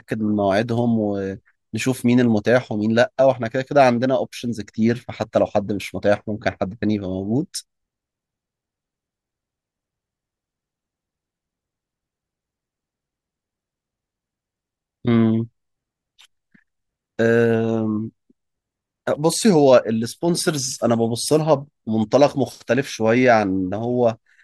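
No technical faults are audible.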